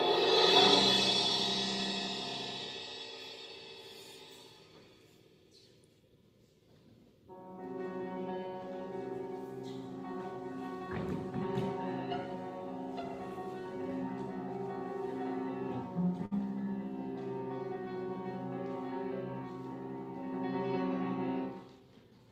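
A packet reached the receiver late at 16.25 s, and the jitter buffer ran dry, causing a short stall from a late packet. About 59 ms of the preceding sound is stretched to fill the gap until 16.33 s, so one moment is held too long with a slight buzz or dip, though nothing is lost and the delay grows by that same 59 ms. Later, the buffer was holding more audio than it needed, and a jitter buffer speed-up from 21.73 to 22.19 s trims it back by repeatedly cutting pitch-period-sized slices, roughly 70 ms in all. The sound plays at about 112% speed with unchanged pitch and comes across as hurried.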